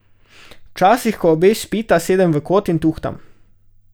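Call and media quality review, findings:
Dropped samples at 0.79 s: single sharp click just before "ko obe spita sedem", a thin vertical line across the spectrum. Likely a buffer or clock-sync slip in capture or resampling that skips a fraction of a millisecond, so the waveform jumps. Unlike a packet-loss dropout, there is no audible gap, muting or smeared syllable.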